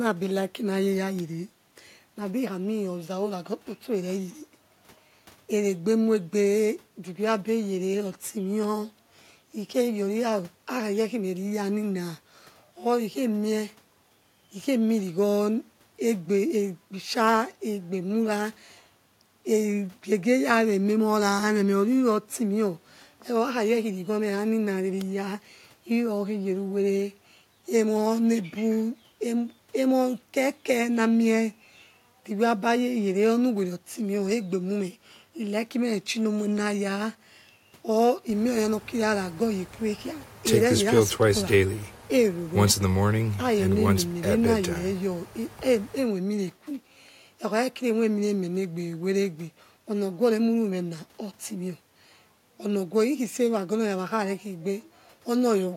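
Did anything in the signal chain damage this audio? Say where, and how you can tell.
No, nothing along the chain from capture to playback has left an audible mark on this speech recording.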